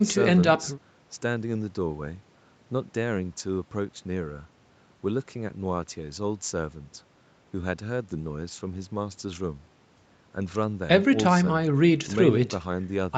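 No technical faults are audible.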